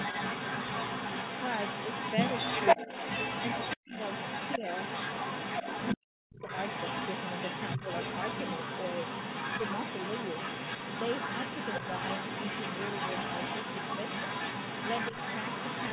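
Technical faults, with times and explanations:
0.0–5.97 s and 6.39–15.93 s, other side's voice leaking through: a second voice sits about as loud as the talker. Incomplete echo cancellation of the far end is the likely cause.
2.75–2.89 s, 3.76–3.93 s, 4.58–4.63 s and 5.95–6.42 s, speech suppressed in double talk: the talker dips by roughly 10 dB, or up to 40 dB at 3.76 s and 5.95 s. This is likely the canceller muting overlapping speech.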